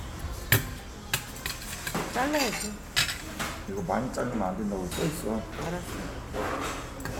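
No technical faults occur at any point in the recording, so there is nothing to describe in time order.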